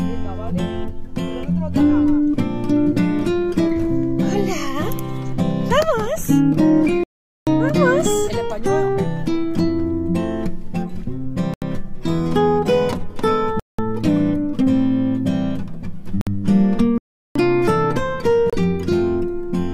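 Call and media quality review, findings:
Playback stall: hard cut to silence mid-flow at 7.04–7.47 s (434 ms) and 16.98–17.36 s (375 ms), output then resumes. Likely the player: buffer ran dry or the playback thread was blocked, so nothing was written until recovery.

Bluetooth stall: brief silent gaps at 11.54–11.62 s (81 ms), 13.60–13.79 s (190 ms), 16.21–16.27 s (56 ms) and 18.50–18.53 s (29 ms). Likely the wireless link: interference delayed packets, the headset buffer drained, and audio resumed once retransmissions arrived.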